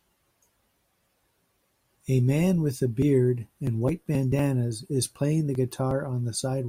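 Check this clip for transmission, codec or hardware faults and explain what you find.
The speech signal shows no audible transmission, codec or hardware faults.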